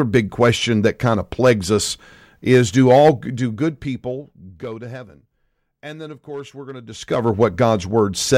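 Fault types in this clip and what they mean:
Nothing here stands out as a fault, so there's nothing to list for this speech clip.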